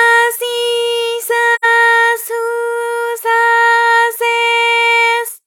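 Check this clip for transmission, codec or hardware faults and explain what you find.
One fault is present: AAC frame loss with muting, from about 1.55 s to 1.65 s. The sound drops into a short gap of roughly 85 ms, which fits two lost AAC frames. The decoder had no data for that stretch and filled it with silence. Because the frames overlap, the audio fades down and back up rather than cutting off. The result is a soft-edged hole.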